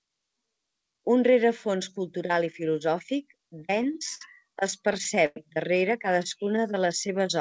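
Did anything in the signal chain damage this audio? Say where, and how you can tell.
Yes. The damage happened at the network and jitter-buffer stage of a call path. The codec itself shows only its band limit, with nothing above 8 kHz, which fits a wideband call codec such as G.722.

Repeated stalls (stutter) appear twice. The first runs from 3.38 to 4.22 s, just after "rerefons cultural i filosòfic". It has eight short gaps, the longest 60 ms, covering about 15% of that span. The second runs from 4.71 to 5.37 s with six gaps, the longest 102 ms, covering about 21%. Packets arrived late, the buffer kept running dry, and the receiver stretched the last sound until data resumed. Nothing is lost, but the audio drags and stutters.

A jitter buffer slow-down runs from 6.20 to 7.36 s. The buffer was rebuilding its reserve by repeating single pitch periods and bits of pauses. That adds 93 ms, so the audio plays at 93% speed with unchanged pitch. 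The sounds come out drawn out.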